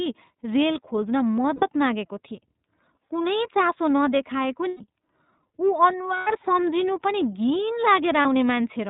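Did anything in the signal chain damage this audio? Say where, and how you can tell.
Yes. The iLBC codec is at work throughout the codec stage. The band stops hard at 4 kHz, so there is no air or sibilant sparkle, and the speech has a slightly rough, synthetic edge from the whole clip being rebuilt from a coded excitation. The damage is plainly audible and fits iLBC's 30 ms frame mode at about 13.3 kbps, with each frame coded independently of the one before.

Lost iLBC frames come from the network stage at 1.56 to 1.64 s, 4.69 to 4.81 s just after "चासो नदेखाएको", 6.18 to 6.27 s, and 8.21 to 8.26 s. Each gap becomes a held, faintly buzzy vowel where the decoder repeats the last pitch cycle mixed with noise. The longest, 120 ms, fits four missing 30 ms frames and fades as it goes. Because each frame stands alone, clean speech returns immediately afterward.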